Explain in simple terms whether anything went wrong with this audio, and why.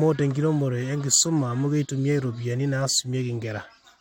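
Nothing went wrong here; no faults can be heard.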